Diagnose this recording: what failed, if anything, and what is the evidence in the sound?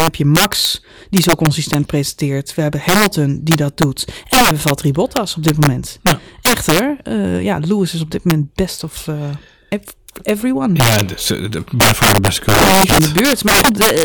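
Violent cracks and harsh snaps break out on the loudest syllables throughout the speech, far sharper than ordinary clipping. This is integer overflow at a gain or sample-format conversion stage: the signal was driven about 11 dB too hot, and around two percent of samples wrapped to the opposite extreme instead of being limited.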